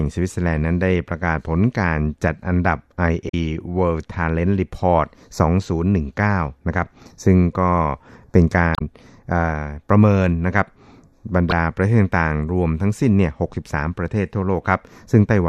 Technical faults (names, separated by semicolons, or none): damaged data in a compressed stream